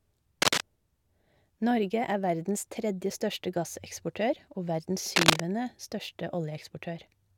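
From 0.42 to 0.61 s, and again from 5.12 to 5.40 s after "største gasseksportør og verdens", cable scratch noise rustles over the speech, a little louder than it, likely from a worn contact shifting. Its dense, irregular texture, not isolated clicks, separates it from digital dropouts.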